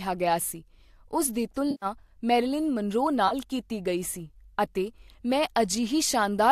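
At 1.71 to 1.86 s, between "ਗਿਆ ਸੀ ਉਸ ਦੀ" and "ਮੈਰਿਲਿਨ ਮਨਰੋ", there's AAC frame loss with concealment: about 110 ms of smeared, phasey fill where the decoder rebuilt lost frames from the last good spectrum. A shorter 30 ms patch follows at 3.28 s, before "ਕੀਤੀ ਗਈ". The clip is also likely coded with low-delay AAC compression, AAC-ELD at 64 kbps, with light codec damage.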